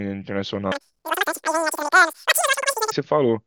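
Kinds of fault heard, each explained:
Wrong sample rate: from 0.72 to 2.92 s the speech samples are clocked out three times faster than they were captured, with no resampling, which fits 16 kHz audio being played at 48 kHz. Because speed and pitch are tied together here, the speech runs at three times its normal pace and jumps up 19 semitones, turning into a squeaky, chipmunk-like chatter before returning to its normal rate.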